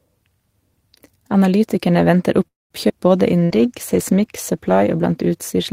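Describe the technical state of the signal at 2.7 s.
Late packets likely drained the jitter buffer: a call audio freeze from 2.47 to 2.73 s fades into 190 ms of silence, then resumes with nothing lost.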